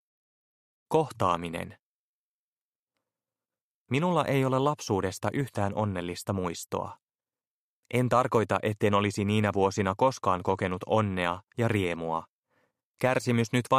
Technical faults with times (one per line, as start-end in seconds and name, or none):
none